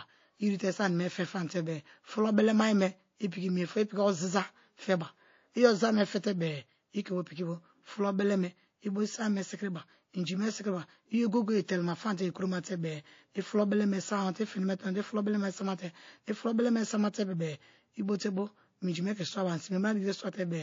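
Throughout the speech the sound is watery and swirly, with sibilants turning metallic and chirpy. This is likely MP3 compression at a low bitrate, around 32 kbps, where the encoder drops weak frequency lines and cuts the top end.

At 11.65 s a hiss rises by about 13 dB and lasts 32 ms before a sharp attack, which then sounds smeared. This is pre-echo: the encoder stayed in long blocks spanning 72 ms, so noise meant for the loud onset spread backwards into the quiet moment just before it.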